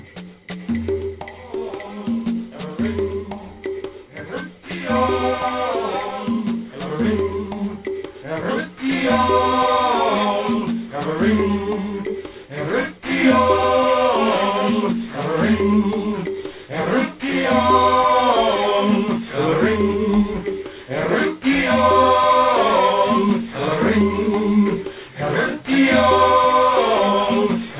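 Throughout the clip, the audio was downsampled without an anti-aliasing filter, which fits a drop from 48 kHz to 8 kHz. Content above 4 kHz folds back into unrelated lower frequencies, sitting around 20 dB below the signal, so bright, hissy sounds turn gritty and metallic, and the aliasing packs energy right up to the band edge.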